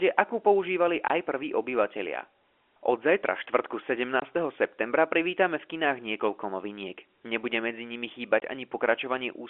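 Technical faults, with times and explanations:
1.08–1.10 s, 4.20–4.22 s and 8.40–8.42 s: packet loss filled with silence. Three 20 ms holes, right after "akú používali", just before "septembra privítame v kinách", and right after "medzi nimi". Each is the length of a single lost packet, and the receiver just played zeros in its place. The waveform drops straight to nothing and comes back abruptly with hard edges, within the 300 Hz–3.4 kHz G.711 telephone band.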